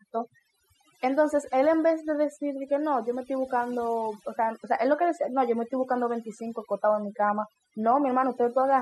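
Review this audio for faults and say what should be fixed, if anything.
The whole clip suffers from overdone noise removal. The denoiser was pushed so hard that any frequency band sitting close to its noise estimate gets clamped down or switched off, and the softer parts of the speech get caught too. You can hear it in the gaps, which drop to near silence with little twinkly specks. Next time, back off the reduction amount and keep some of the noise floor.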